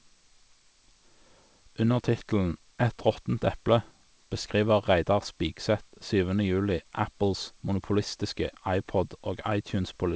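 Listening through the speech, nothing stood out as a technical fault at any point.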